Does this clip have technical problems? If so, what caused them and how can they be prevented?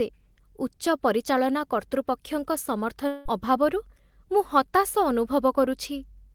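Yes. From 3.07 to 3.27 s the speech gives way to a smeared, buzzy continuation of the last sound that fades across roughly 180 ms, and when the talker returns a piece of the speech is simply gone. This is a long network dropout, likely caused by packets that never arrived: the receiver had nothing to play, so it stretched the final sound to cover the gap instead of leaving silence. To prevent it, use a more stable network path and a larger jitter buffer, or add forward error correction so lost packets can be rebuilt.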